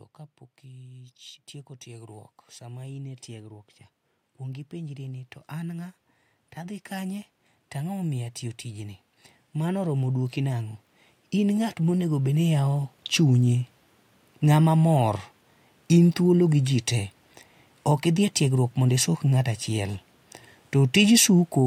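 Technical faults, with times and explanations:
1.83–3.73 s, 4.24–5.97 s, 6.55–8.99 s, 9.53–10.75 s, 11.31–13.47 s, automatic gain rising: speech and background swell together by about 3 to 5 dB over roughly 1.2 to 2.4 seconds, as automatic gain control repeatedly judges the input too quiet and raises its gain.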